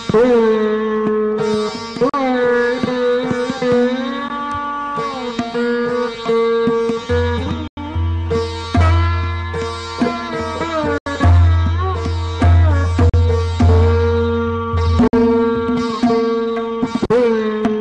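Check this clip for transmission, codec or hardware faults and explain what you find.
Two faults are present: repeated short dropouts and a sped-up final section.

Six gaps of silence, at 2.09 s (40 ms), 4.28 s (13 ms), 7.68 s (93 ms), 10.98 s (80 ms), 13.09 s (40 ms) and 15.08 s (53 ms), cut in and out. Each is likely a Bluetooth dropout: audio packets arrived too late and were discarded, the gap lengths fitting whole lost packets of about 13 ms. Playback resumes further along, as if the sound continued underneath.

From 14.44 s to the end, the pace jumps to about 1.57 times normal while pitch stays unchanged. This is likely a time-stretched section, where software squeezed the audio by dropping short segments to preserve pitch, giving a rushed quality.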